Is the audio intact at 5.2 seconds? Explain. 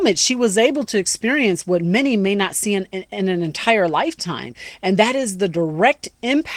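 Yes, at 5.2 seconds the audio is intact, with no dropout, glitch or other fault at that moment.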